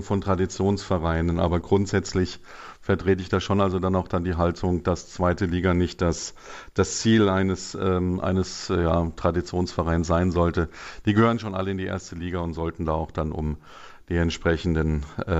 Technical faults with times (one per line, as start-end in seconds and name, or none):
none